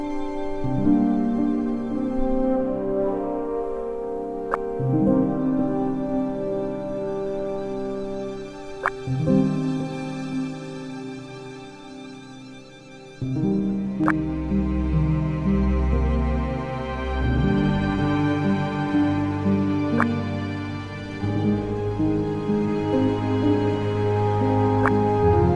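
No technical faults are audible.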